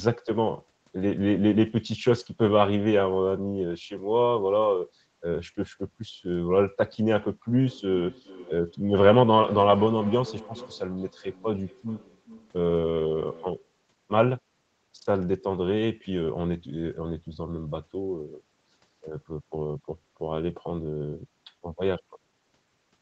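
From 7.6 s to 13.82 s the speech is followed by a feedback echo between two devices. A second device in the same room is playing the call back, and its output reaches the first microphone again. That microphone's echo canceller only removes its own playback, so each word returns roughly every 400 ms, thinner and more ringing. It peaks at about 17 dB below the speech and, like the speech, carries nothing above 8 kHz from the call path.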